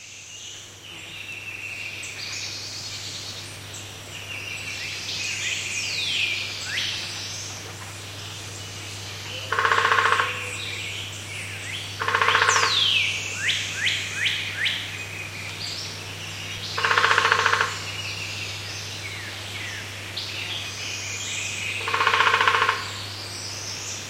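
At 16.58 s an underrun with held sample freezes the output for 2.9 ms, which fits a 128-sample buffer. The waveform goes flat, and about 3 ms of audio is lost.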